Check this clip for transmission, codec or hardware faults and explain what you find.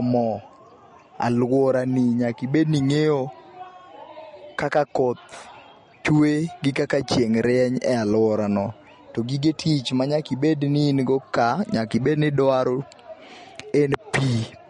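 One codec fault is present throughout the speech, and it sounds like MP3 compression at a low bitrate, consistent with about 40 kbps. The likely cause is that the encoder, short of bits, cut all content above 10.6 kHz and dropped weak frequency lines frame by frame, giving a plainly audible watery swirl and metallic chirps on s sounds. On a spectrogram this shows as a hard ceiling at 10.6 kHz with flickering holes below it.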